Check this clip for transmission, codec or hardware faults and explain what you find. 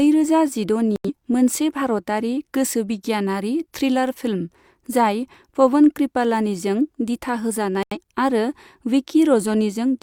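Two digital broadcast dropouts occur, from 0.96 to 1.10 s and from 7.83 to 7.97 s. The receiver muted after frames failed, which fits about two lost frames each time. Unlike codec glitches or concealment, the sound drops to clean silence and resumes later with nothing repeated.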